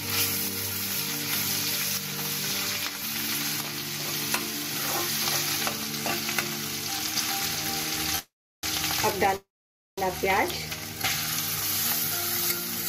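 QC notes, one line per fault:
8.15–8.19 s, short stall from a late packet: the last sound is held a little too long, with a faint buzz or dip, while the jitter buffer waits for one packet. Unlike a freeze, there is no silence; about 23 ms is added and nothing is lost.
8.19–8.64 s and 9.36–9.98 s, call audio freeze: the last sound is stretched into a fading buzz or hiss, then silence of about 350 ms and 530 ms. Playback resumes where it stopped, 443 ms and 614 ms late, likely from packets held up in transit. Unlike a dropout, nothing is missing.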